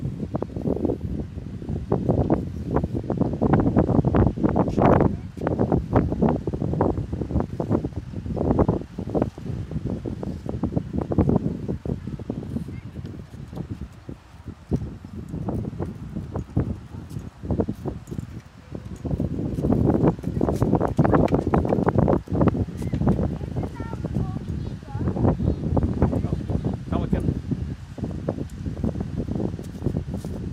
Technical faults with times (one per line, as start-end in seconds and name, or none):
4.69 skip ahead
7.47-8.23 jitter buffer speed-up
8.66-11.08 jitter buffer speed-up
11.79-12.25 jitter buffer speed-up
12.80-13.76 jitter buffer speed-up